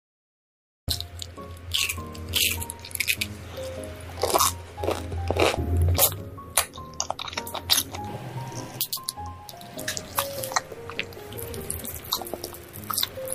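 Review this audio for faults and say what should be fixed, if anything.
Cut-off start: the opening 0.88 s is digital silence, and at 0.88 s the audio jumps straight into a sound already under way, with no attack or fade-in. Capture began after the source was already playing, so the beginning of that sound was never recorded. To prevent it, arm and start recording before the source begins, leaving a short pre-roll.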